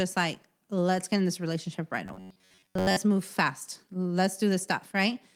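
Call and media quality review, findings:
Robotic sound from repeated short buffers, 2.06–2.97 s. Speech collapses into a rigid metallic buzz at 93.8 Hz. Likely cause: jitter-buffer underrun, with the last ~10.7 ms looped while new audio is skipped. Most of the span is repeated. Separately, Opus voice compression is audible as a light coding texture across the full band, which fits hybrid mode at around 24 kbps.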